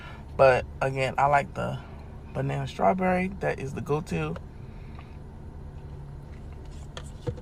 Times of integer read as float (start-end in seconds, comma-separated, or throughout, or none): none